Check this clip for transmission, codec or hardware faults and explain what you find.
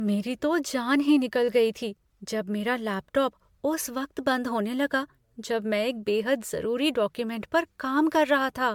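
One codec fault runs through the whole clip. Throughout, the speech sounds swirly, smeared and hollow, with blurred attacks and nothing above 19.9 kHz. This is generation loss, likely from about ten MP3 encodes near 134 kbit/s, each quantising on a shifted frame grid and compounding noise and spectral holes.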